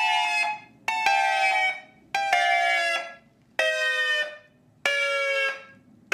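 A doubled audio track runs from the very start until 2.9 s: a full-band copy trails about a second behind, roughly 5 dB quieter, with no decay or room colour. It likely comes from a second, slower capture path or an edit holding two offset copies, and cuts off abruptly.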